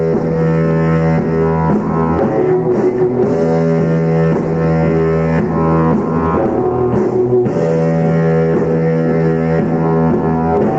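Gain pumping runs through the whole clip. The level swings by around 5 dB. The likely cause is input gain set far too high, with a fast limiter or compressor clamping down on every peak. Loud and soft parts sit closer together than they should. The result sounds squashed. The audio also stops at 8 kHz, as a call path would.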